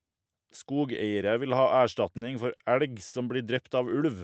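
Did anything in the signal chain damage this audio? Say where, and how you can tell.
Yes, at the network jitter buffer: short stalls from late packets after "vil ha" (2.17 s), before "elg som" (2.55 s) and at 3.07 s, each stretching sound 40 to 60 ms.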